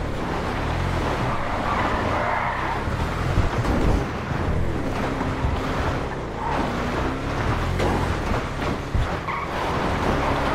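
No technical faults can be heard anywhere in the audio, and the signal stays intact throughout.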